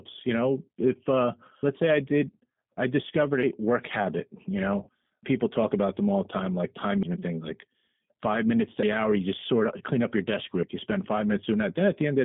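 Throughout, the G.729 codec confines the sound to roughly 150 Hz to 3.6 kHz at 8 kbit/s, giving plainly audible rough, synthetic speech texture.

At 1.63, 3.43, 5.23, 7.03, 8.83 and 10.63 s, skips recur every 1.8 s as about a fifth of a second is spliced out, likely audio missing between chunks. The first two fall between "know if uh" and "let's say I did", then between "did I discovered a" and "work habit you", and one follows "like five minutes to".

From 4.83 to 4.89 s, VoIP packet loss concealed by the speech codec replaces 40 ms with an extrapolated, fading sound, and the voice stays weak or distorted for a short while after packets return.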